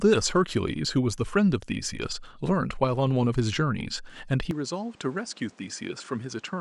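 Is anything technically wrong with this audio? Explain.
Yes. From 4.51 s to the end, the speech turns duller and quieter with no gap, likely from an input switched to a poorer device. On a spectrogram, everything above 9.8 kHz vanishes at once. The waveform drops about 5 dB, and a new noise floor sits about 30 dB below the speech.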